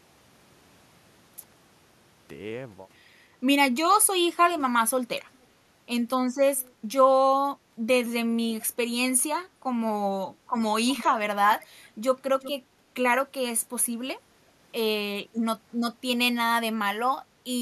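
Echo leak at 4.59 to 5.46 s and 6.58 to 6.73 s: a faint delayed copy of the speech, about 360 and 400 ms late. It is likely loudspeaker pickup that slipped past the echo canceller.

Speech suppressed in double talk at 8.75 to 10.42 s: the talker dips by a few dB in short bursts. The likely cause is the canceller ducking both sides while the far end speaks.

Echo leak returns at 10.93 to 12.52 s, much more prominent, delayed about 370 ms.

Further speech suppressed in double talk at 14.43 to 16.01 s and 17.19 to 17.44 s, with longer stretches pulled down.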